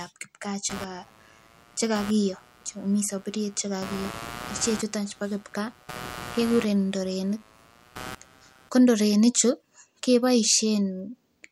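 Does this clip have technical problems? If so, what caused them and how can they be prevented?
Yes. Computer activity noise runs from 0.69 to 8.69 s, starting just after "ab kipkaa" and ending before "ko ndorenik". It is a buzzing, chirping layer pulsing at around 100 times a second, roughly 20 dB below the speech. The computer's changing processor, graphics or mouse load shifts the ground that the audio circuit shares, so the noise follows the machine, not the speech. To prevent it, use an external USB or isolated audio interface, or a ground-loop isolator.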